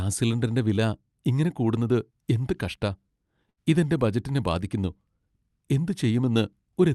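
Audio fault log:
3.49 to 3.59 s, burst of packet loss: a few lost packets get papered over by stretching and fading the last bit of speech, then about 80 ms is just gone.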